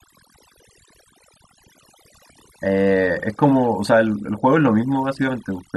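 Across the whole of the speech, from start to finish, the clip carries the marks of overdone noise removal. The noise reduction was pushed too hard on a noisy recording. Individual frequency bands close to the estimated noise floor were cut deep or removed outright. Quieter parts of the voice were caught and removed too. The background drops away, broken by twinkling specks.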